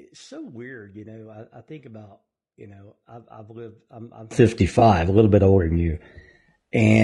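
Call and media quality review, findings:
Rough, grainy speech for the whole clip, with noise between the harmonics and a thin, synthetic top band. Likely cause: low-delay AAC compression (AAC-ELD). Its short frames resolve pitch harmonics poorly, and the sound points to a low bitrate near 32 kbps. The damage is plainly audible.

Sudden gain jump at 4.31 s, just after "I've lived I'm I'm". Speech and background noise step up together by about 24 dB and stay raised to the end. Likely a gain setting or bit shift applied without a ramp.

AAC frame loss with concealment, 4.79 to 4.82 s, just after "I've lived I'm I'm". A brief smeared, noisy patch of about 20 ms, which fits one lost frame. The decoder bridges the gap by rebuilding from the last good spectrum.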